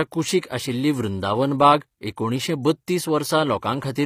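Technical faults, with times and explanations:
Throughout, HE-AAC compression: the damage is plainly audible across the whole speech clip. The top end has been rebuilt by copying lower bands upward under a coarse envelope, so the treble harmonics don't line up with what's underneath, and s sounds come out gritty and a bit metallic. Nothing reaches above 15.5 kHz. That likely points to HE-AAC v2 at a low bitrate, around 24 kbps.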